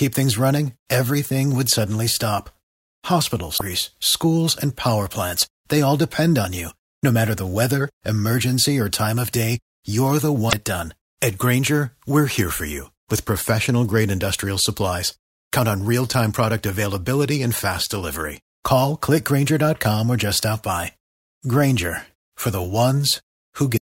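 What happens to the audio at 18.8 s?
Nothing goes wrong at 18.8 s; the speech there plays through intact, with no dropout, click, distortion or other fault at that moment.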